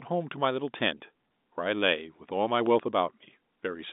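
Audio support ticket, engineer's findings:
Brief buzzy hold at 0.98–1.00 s, the sound momentarily sustained rather than dropping out. Packet loss with pitch repetition: about 20 ms of audio missing, fitting one lost packet. The receiver looped the last pitch period to fill the gap, so it reads as a held note.

Loud pop, a double pop at 2.66–2.82 s, peaking about 5 dB above the signal, with the sound continuing underneath. Likely a voltage step or pulse from a plug, switch, static discharge or driver glitch, shaped by downstream circuitry into two sharp transients. The line band of roughly 200 Hz to 3.7 kHz matches G.711 A-law telephone coding at 64 kbps.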